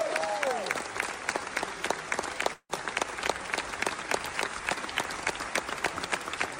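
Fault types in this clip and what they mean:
Long network dropout: audio likely stopped arriving from 2.53 to 2.71 s; a fading buzz fills it, showing as smeared spectrogram bands ending in a blank gap.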